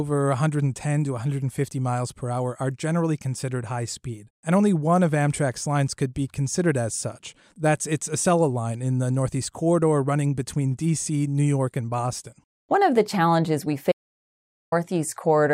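At 13.92 s the speech cuts off abruptly into an audio dropout to silence. The gap runs until 14.72 s, about 0.8 s. It is dead silence, with no room tone or hiss underneath. Then the speech returns just as suddenly, mid-flow. The input signal was likely lost for that moment, through a disconnected device, a failed link or a stray mute, while the recording kept writing silence. Whatever was spoken in that gap is gone.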